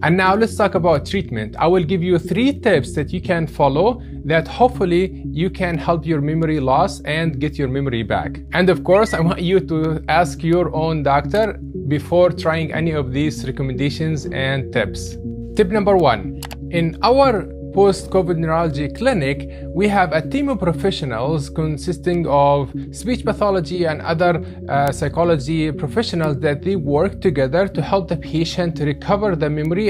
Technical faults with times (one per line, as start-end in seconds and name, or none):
0.27-29.65 word clock ticks